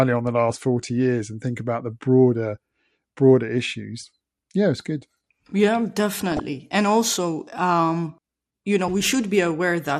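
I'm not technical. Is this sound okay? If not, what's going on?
No. All the way through, the speech sounds dull and muffled, with a plainly audible gurgling, grainy edge on the words, a bit like listening to low-quality digital radio. That is most likely MP2 compression: the format splits the sound into narrow frequency bands and, with too little data to spend, switches off the highest bands and stores the rest roughly. That loses the crispness and adds the gritty texture.

Between about 6.32 and 6.40 seconds there is a brief glitchy burble over the speech. This is DAB burbling. When a digital radio signal is weak, some errors slip past the error correction and corrupt the compressed audio, so individual frequency bands get short blips of noise for a split second. That produces the short burst heard there.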